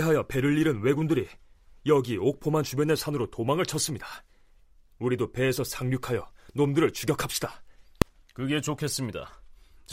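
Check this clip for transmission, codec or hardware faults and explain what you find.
One fault stands out. At 8.02 s there are invalid numbers at full scale: a calculation yielded infinite or invalid values that were pinned to maximum amplitude for about 1.3 ms, which fits a 64-sample block. The block is so short that it is heard as a single loud bang. Unlike an ordinary click or a dropout, it sits flat at one extreme value far beyond the speech peaks, with no gradual edge.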